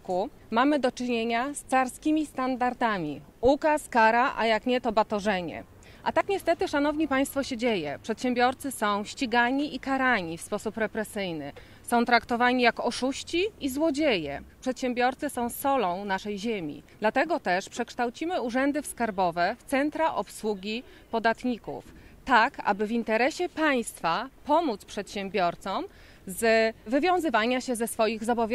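At 6.21 s and again at 16.18 s the sound skips forward abruptly, jumping past roughly 30 ms with no gap of silence. The matching 10-second spacing points to audio missing between chunks: a recorder likely dropping a sliver each time it hands off from one chunk to the next.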